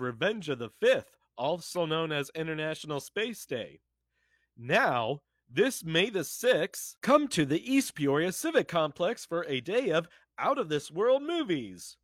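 Speech recording with no audible technical faults.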